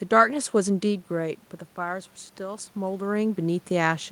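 Automatic gain rising begins at 1.17 s and continues to the end of the clip. Just before it starts, the talker moves away from the microphone at roughly one second, and the input falls by about 9 dB. The gain control reads this as too quiet and slowly raises its gain, so the speech and the room noise swell up together over the next few seconds rather than jumping back at once. A second shift in the talker's position around two and a half seconds is heard within that rise.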